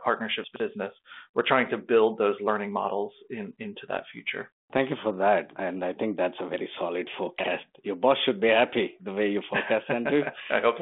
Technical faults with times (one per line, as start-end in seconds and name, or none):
0.44-0.60 chunks out of order
7.40-7.48 chunks out of order